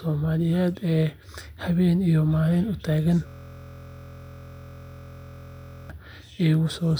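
From 3.27 s to 5.90 s the speech gives way to a system hang loop. The computer or driver stalled while the sound hardware kept replaying its ring buffer, so one 23.22 ms slice of audio repeats exactly, well over a hundred times, which fits a 1024-sample buffer. Because the slice is so short, it sounds like a steady buzz at 43.1 Hz. That unchanging, perfectly periodic repetition sets it apart from a dropout or a glitchy stutter.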